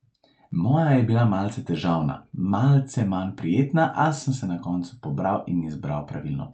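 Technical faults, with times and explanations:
The speech passes through an Opus call path working as intended, with its band limited at about 8 kHz and no technical faults in the signal.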